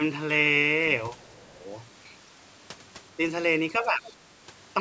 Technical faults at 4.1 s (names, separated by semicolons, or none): speech suppressed in double talk; other side's voice leaking through